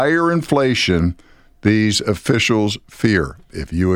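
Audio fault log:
No faults can be heard in this speech recording. There is nothing here to log.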